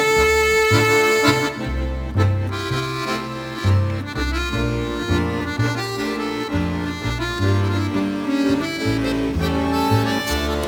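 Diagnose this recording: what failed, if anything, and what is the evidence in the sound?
Crude rate conversion runs throughout the recording, a failure at the sample-rate conversion stage. A gritty, inharmonic fizz rides on the louder and brighter passages, sitting roughly 25 dB below the sound. The rate was changed by repeating the nearest sample rather than filtering and interpolating. The uneven repeat pattern, which points to a 44.1 kHz to 48 kHz step, adds tones unrelated to the original.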